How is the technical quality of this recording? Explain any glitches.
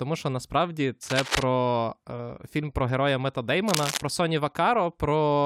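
The recording has two short bursts of cable scratch noise. The first runs from 1.03 to 1.43 s, right after "що насправді", and the second from 3.68 to 4.02 s. Each is a dense, uneven scratching or rustling only a little quieter than the speech. It is likely a worn cable or connector being moved, its contact resistance jumping rapidly. Unlike a single digital click or dropout, each burst lasts for a fraction of a second and sounds ragged and textured rather than abrupt.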